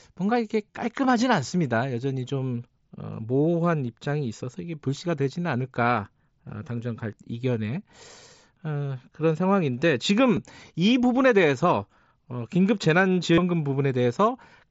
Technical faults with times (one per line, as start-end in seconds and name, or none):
0.72-0.74 concealed Bluetooth headset packet loss
10.36 concealed Bluetooth headset packet loss
13.33-13.38 concealed Bluetooth headset packet loss